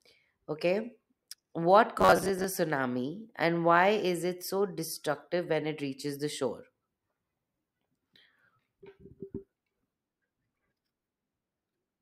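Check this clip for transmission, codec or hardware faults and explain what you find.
One fault is present, robotic sound from repeated short buffers. From 1.99 to 2.45 s, audio likely arrived too slowly, so a roughly 10.7 ms chunk was looped. About two fifths of the passage is repeats, which forces a rigid, metallic buzz near 93.8 Hz onto the speech.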